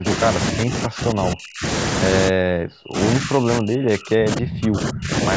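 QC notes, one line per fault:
0.0–0.2 s, 0.37–1.64 s, 2.29–2.99 s and 3.19–5.11 s: speech suppressed in double talk. The speech dips sharply, by up to about 40 dB, and drops out in pieces. The likely cause is an echo canceller turning the talker down while the far side spoke.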